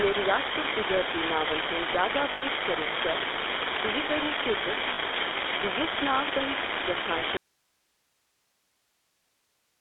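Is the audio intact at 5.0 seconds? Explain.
No. The full-rate GSM codec encodes the speech as a vocal-tract model driven by sparse pulses, leaving a buzzy, gravelly roughness confined to roughly 250 Hz to 3.6 kHz. A marginal data line flips one bit at random, adding a steady crackle that persists even through pauses. Just before 5.0 s, from 4.94 to 4.99 s, lost GSM frames were concealed by repeating the last good frame, producing a brief rough, metallic ring. The 40 ms gap fits two missing frames.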